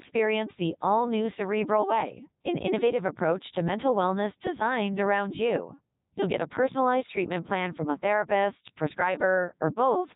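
The clip is speech, and it runs through a Codec 2 vocoder from start to finish. The voice sounds robotic and buzzy. Only pitch, voicing, energy and a rough spectral envelope survive. The decoder rebuilds everything from sine waves, so the original waveform is gone. The damage is heavy even at Codec 2's top rate of about 3.2 kbit/s.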